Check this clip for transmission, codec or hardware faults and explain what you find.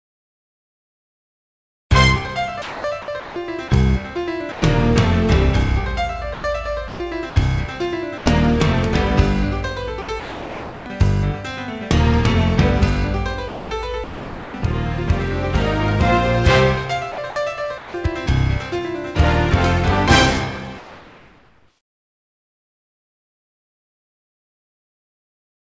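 The clip has repeated discontinuous-transmission faults: choppy gating, two brief dropouts, and a synthetic background at the end. It passed through a wideband call path with nothing above 8 kHz, which fits G.722.

Sound chopped by the voice detector occurs over 0.0–3.7 s, 6.34–7.36 s, 10.02–10.86 s, 13.48–14.54 s and 17.12–17.94 s. The likely cause is the sender's voice detector switching transmission on and off repeatedly, with comfort noise inserted whenever it stopped. About 2.4 s of the first stretch is replaced, 0.72 s in the third and fourth, and 0.28 s in the second and fifth. The result is fragmented sound.

Sound dropped by the voice detector occurs at 4.52–4.62 s (100 ms) and 8.18–8.26 s (80 ms). Here the detector likely misjudged quieter material as background and halted transmission, so the receiver substituted comfort noise. Each gap is heard as the sound briefly giving way to a flat noise before the detector retriggers and the signal resumes.

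Comfort noise in place of the background runs from 20.78 s to the end. With no signal detected, the sender likely stopped transmitting apart from occasional noise-level updates, and the receiver generated a matching synthetic floor. The real background, sitting about 56 dB below the loud parts, is replaced by a steady, featureless hiss roughly 2 dB quieter than the original.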